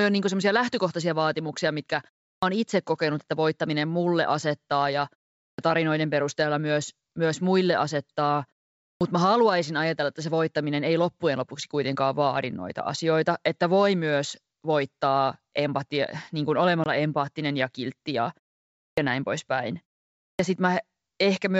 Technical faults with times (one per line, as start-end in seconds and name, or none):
2.36-2.42 clipped start after a pause
5.51-5.58 clipped start after a pause
8.94-9.01 clipped start after a pause
16.84-16.87 packet loss on an ADPCM call
18.90-18.97 clipped start after a pause
20.32-20.39 clipped start after a pause